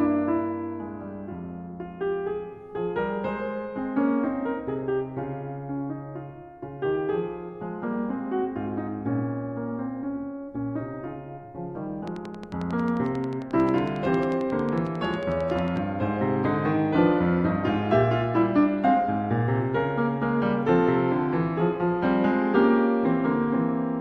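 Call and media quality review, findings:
Train of clicks, 12.08 to 15.78 s: regular ticking over the music at 11.1 per second, around forty near-identical pulses peaking roughly 5 dB above the programme. Likely external interference or a faulty connection or power supply injecting a repeating pulse.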